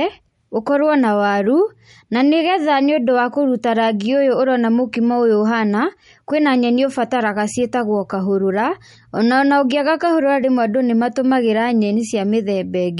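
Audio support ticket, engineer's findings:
Watery, swirly speech throughout, sibilants thin and chirpy, nothing above 11.2 kHz. Likely MP3 compression at a starved bitrate, roughly 46 kbps. Encoder lowpasses the treble and drops weak spectral lines frame to frame, leaving plainly audible codec damage.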